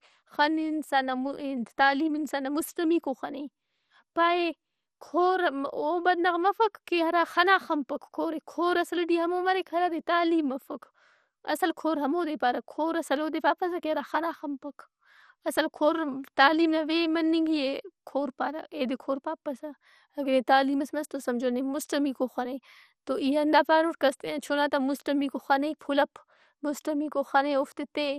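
Throughout the speech, the audio was likely squeezed through MP2 compression at a low bitrate, consistent with about 64 kbps, so upper sub-bands are starved of bits. Nothing remains above 14.3 kHz, leaving the sound dull, with plainly audible gurgling, granular distortion.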